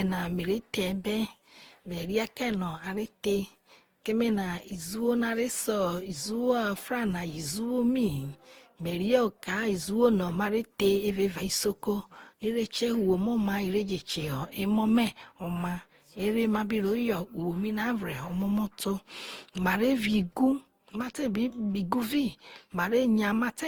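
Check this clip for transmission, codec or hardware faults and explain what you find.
One codec fault runs through the whole clip. Generation loss: the speech sounds swirly, hollow and smeared, with blurred attacks, likely from around seven successive lossy re-encodes, consistent with Opus near 48 kbit/s, each compounding quantisation noise.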